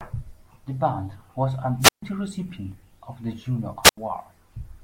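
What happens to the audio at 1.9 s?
The radio link from the wireless microphone fades, so the receiver's squelch shuts the output: a wireless microphone squelch dropout from 1.80 to 2.03 s, just after "band was a". Static rises briefly, the speech drops into near silence for 141 ms, then returns.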